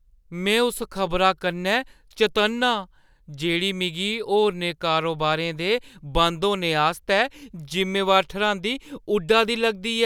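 Nothing technical goes wrong anywhere in this recording, so there's no fault to point to at any moment.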